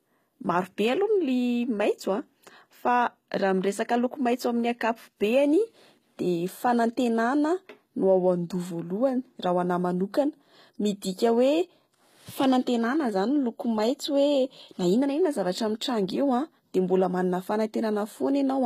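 HE-AAC compression throughout, likely near 20 kbps: treble copied up from lower bands turns s sounds gritty and lispy, and nothing remains above 14.9 kHz.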